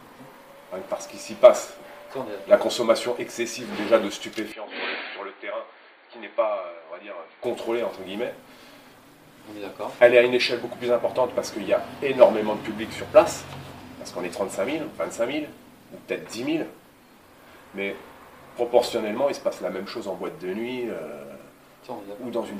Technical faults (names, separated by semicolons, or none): input switched to a poorer device